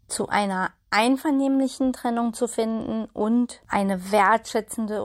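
No technical faults can be heard anywhere in the recording, which carries its speech without any interruption, distortion or artefact.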